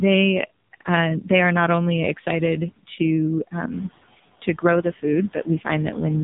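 A noise suppressor runs through the whole clip, lowering the frequency bands it judges to be steady noise by about 17 dB frame by frame. The background sinks in the gaps between words and comes back up underneath the speech, so the noise floor pumps with each phrase.

The entire clip has also passed through the AMR narrowband mobile codec. Its 8 kHz sampling removes everything above about 3.8 kHz, and the heavy coding damage, which points to a low rate near 5.9 kbps, makes the speech sound buzzy, synthetic and muffled.

Around 3.5 s the room noise rises by about 12 dB and then sits about 14 dB below the speech. This is part of the recording, not a system fault.

Between 5.33 and 5.67 s the noise suppressor cuts speech, treating part of it as noise and pulling it down by as much as about 14 dB. Roughly a tenth of a second of sound within that stretch comes out swallowed and faint.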